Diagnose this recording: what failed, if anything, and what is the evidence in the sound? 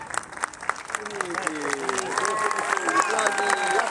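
Nothing failed; no fault can be heard in the recording.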